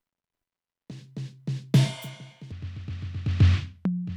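At 2.52 s the music abruptly sags, dropping in pitch by about seven semitones and dragging in tempo, and it stays that way to the end at 4.17 s. Pitch and pace fall together, the signature of a section at the wrong speed: the last part plays at 0.671 times its proper rate. The likely cause is that stretch being clocked or resampled at the wrong rate when it was edited or played back.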